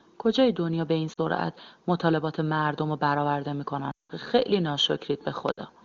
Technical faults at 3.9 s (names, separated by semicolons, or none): lost AMR speech frames